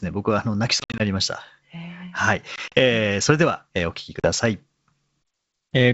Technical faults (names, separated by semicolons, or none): packet loss on an ADPCM call